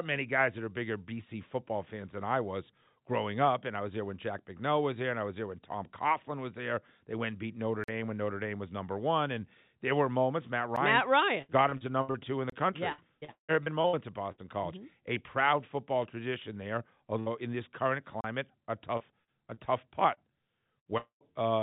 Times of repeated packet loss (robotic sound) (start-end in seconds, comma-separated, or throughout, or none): 11.42-12.17, 12.92-14.41, 18.97-20.20